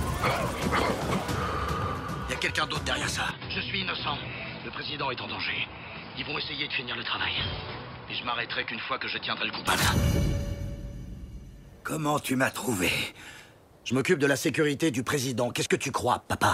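From 3.31 s to 9.67 s the input was likely switched to a poorer device: the sound abruptly narrows, with nothing above about 5.2 kHz, drops about 5 dB, and gains a new noise floor roughly 30 dB down, then clears again without any gap.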